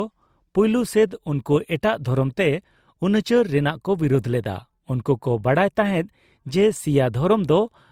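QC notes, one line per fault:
Throughout: transcoding between lossy codecs. The speech has a layered texture, with the different codec artefacts heard together. Bandwidth reaches only about 20.1 kHz. This likely comes from a low-rate Opus encode that was decoded and encoded again as MP3. The mix of artefacts points to roughly 32 kbit/s Opus followed by 96 kbit/s MP3. The MP3 stage spends its bits on the Opus artefacts and adds its own.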